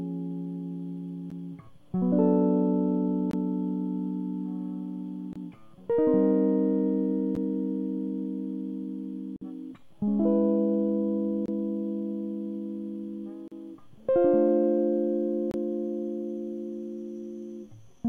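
Gaps between stream segments cut this music at 1.30, 3.31–3.33, 5.33–5.36, 7.35, 9.36–9.42, 11.46–11.48, 13.48–13.52 and 15.51–15.54 s, roughly every 2 s, where segment timestamps fail to meet and silence fills the hole. Each sounds like a sharp dropout and shows as a hard-edged flat line in the waveform and a blank vertical stripe on a spectrogram.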